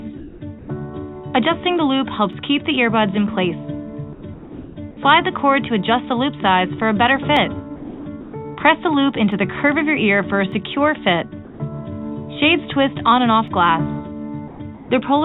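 From 0.17 to 0.68 s the real background gives way to a steady, featureless hiss. This is comfort noise in place of the background, likely because the sender's discontinuous transmission stopped sending and the receiver synthesised noise instead. Inside that stretch, from 0.59 to 0.68 s, the sound is dropped by the voice detector. About 40 ms of sound was likely judged to be background and is lost under the synthetic fill until the detector triggers again.

Single sharp clicks from dropped samples fall at 2.33, 7.37, 9.32, 10.52 and 13.48 s. At each one, likely a fraction of a millisecond of samples went missing, so the waveform jumps and a thin vertical line crosses the spectrum.

From 4.13 to 4.76 s comfort noise again replaces about half a second of background, likely from the same discontinuous transmission.

From 7.76 to 8.33 s the sound is chopped by the voice detector. It likely toggled repeatedly, and around 420 ms of quiet portions become brief noise fills, making the sound choppy.

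From 11.45 to 11.60 s a further voice-detector dropout likely removes about 60 ms of sound behind steady noise.

From 14.48 to 14.90 s comfort noise once more replaces the background, likely as transmission pauses.

Throughout the clip, nothing is heard above 4 kHz, which fits a narrowband call path.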